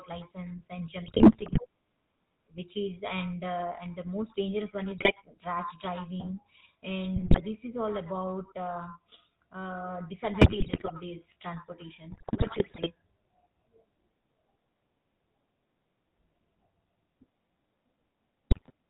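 Speech runs through the GSM full-rate codec for the whole clip, with a buzzy, gravelly roughness and nothing above 4 kHz. This fits the old 13 kbps vocal-tract model driven by sparse regular pulses. Unlike a simple band-limit, the grit rides on the voice itself. GSM bit errors break in at 1.06–1.66, 4.98–5.12, 7.16–7.42, 10.41–10.91, 12.10–12.91 and 18.50–18.71 s as squawks, pops and gargling. Corrupted filter, pitch and gain values distort or spike the level frame by frame, rather than leaving the gaps or repeats of lost packets.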